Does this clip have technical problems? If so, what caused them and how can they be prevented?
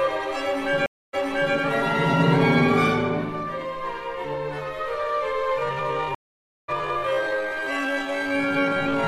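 Yes, there are two kinds of problem here.

The first is a stream reconnect, which happens twice. At 0.86 s the sound drops out for about 0.27 s, and when it comes back at around 1.55 s it jumps back 0.42 s, so you hear a short stretch again. That happens when the server resends a burst to a freshly started decoder. At 6.15 s it drops out for 0.54 s, then picks up around 6.70 s roughly 0.3 s further on, so a bit is just missing. In both cases the connection broke and the player restarted decoding mid-stream. A bigger receive buffer and a player that resumes from a proper byte offset would keep these from being audible.

The second is a time-stretched section running from 5.57 s to the end. The pace drops to about 0.55 times normal speed while the pitch stays put, so it drags. This is likely software padding the audio out to fill a target length by repeating short slices. Trimming or editing to length instead of stretching, or keeping any stretch small, would avoid that dragging sound.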